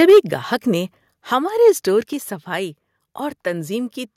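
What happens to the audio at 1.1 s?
At 1.11 s, between "گاہک نے" and "ہمارے اسٹور", the speech and the background drop together by about 4 dB in a single step. This is a microphone volume stepped down, likely the call software lowering the input volume. The waveform envelope shrinks abruptly, and the spectrogram dims evenly across all frequencies from that point.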